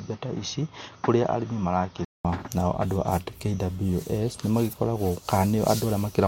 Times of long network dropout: none

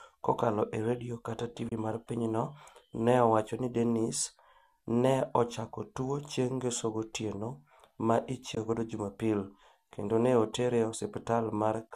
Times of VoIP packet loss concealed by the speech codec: none

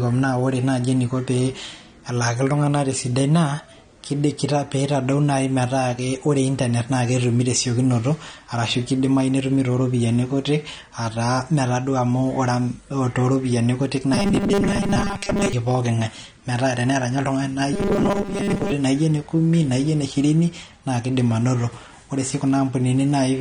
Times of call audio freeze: none

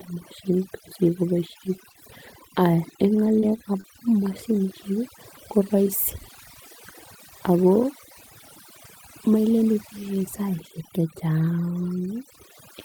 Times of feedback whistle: none

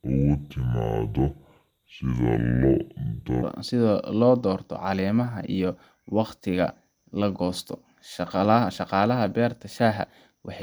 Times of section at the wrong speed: 0.00-3.43

